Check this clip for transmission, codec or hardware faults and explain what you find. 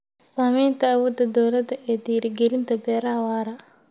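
Nothing in the speech points to a transmission, codec or hardware problem, and the signal holds steady throughout with no dropouts, distortion or level disturbances to report.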